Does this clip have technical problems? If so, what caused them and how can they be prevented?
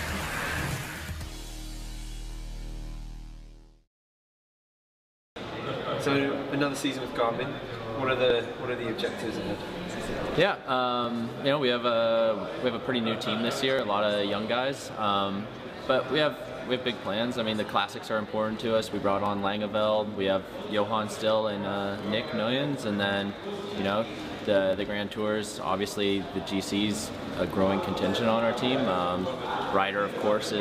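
Yes, there are about ten clicks every 2.74 s, from 2.83 to 30.21 s. These are likely clock drift buffer slips: two free-running clocks disagree by a few hundred ppm, so small blocks get dropped or repeated. Lock both devices to a shared clock.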